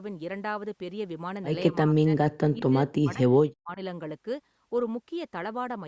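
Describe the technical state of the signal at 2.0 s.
At 2.0 s the speech falls inside a span of suppression from 1.71 to 2.14 s, where the level drops by as much as roughly 40 dB. The likely cause is speech suppressed in double talk: an echo canceller mistook near-end speech for echo and attenuated it.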